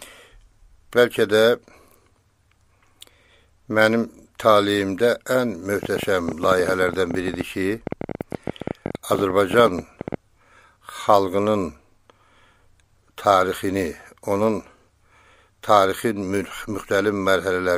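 From 5.83 to 10.15 s, a train of clicks ticks over the sound. About fifty similar pops arrive unevenly, near 12.3 per second, peaking about 10 dB above the audio. Likely interference.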